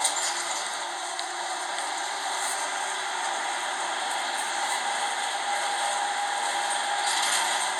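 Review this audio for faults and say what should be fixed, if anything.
No faults found, so nothing needs fixing.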